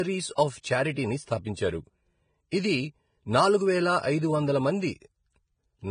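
Speech with heavy codec damage throughout, likely from Vorbis compression. Nothing remains above 9.7 kHz. The treble is quantised so coarsely that fine detail turns to grainy hiss. The damage fits a low bitrate, around 22 kbps. Sharp attacks also show pre-echo. A short smear of hiss runs ahead of each onset: 0.35 to 0.38 s (26 ms), 0.61 to 0.64 s (33 ms), 2.50 to 2.53 s (30 ms), and 5.00 s (19 ms). The codec spreads its noise across a whole block, so it leaks into the quiet moment before each attack.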